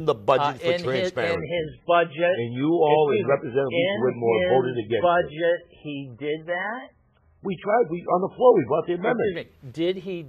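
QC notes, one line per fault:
1.35–9.35 s, adaptive stream at a lower bitrate: quality drops abruptly with no gap. Nothing above 3.5 kHz survives, and smeary codec artefacts take over, which fits the player switching to a very low-bitrate MP3 version, around 8 kbit/s, while the connection slowed.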